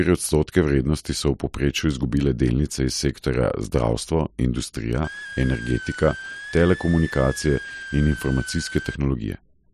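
A switching supply whistle runs from 5.04 to 8.96 s in this speech clip: a thin high tone centred around 1.5 kHz that wanders between 1.46 and 1.79 kHz, sitting roughly 15 dB below the speech. It comes from a switch-mode power supply whose switching rate has dropped into the audible band, and the wandering pitch follows that rate shifting as the supply's load changes.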